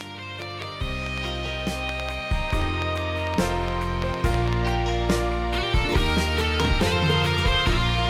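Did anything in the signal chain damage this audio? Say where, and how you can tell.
Yes. A train of clicks runs from 0.01 to 4.54 s, about twenty irregular pops near 4.2 per second, roughly 10 dB above the audio. The likely cause is interference coupling into analogue wiring, or a struggling interface.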